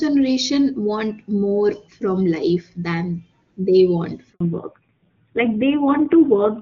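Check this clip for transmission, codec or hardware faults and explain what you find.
Two faults show up in the last third of the clip, both at the same moment.

Handover gap, 4.32 to 4.40 s: right after "life than they want," the call moves from one network link to another and no speech frames arrive while the switch completes. The voice drops away over a few tens of milliseconds and stays silent for about 80 ms until the new link delivers audio. Whatever was spoken in that window is simply missing, leaving a brief hole in the sentence.

Fallback to narrowband, 4.40 s to the end: when the new link comes up, the call has left HD Voice for an older narrowband codec. Before the switch, the sound has the full, airy top end of AMR wideband at a high rate, which fits 23.85 kbit/s. Afterwards nothing is left above 4 kHz, so the speech turns muffled and dull, and the low-rate coding adds a rough, grainy edge consistent with AMR-NB at 5.9 kbit/s.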